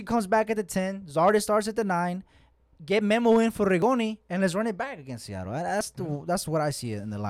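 At 3.82 s and again at 5.81 s the speech jumps forward, losing a few milliseconds and then roughly 15 ms, most likely a dropped buffer (overrun) where unread samples were overwritten. No silence fills the gap, unlike a dropout.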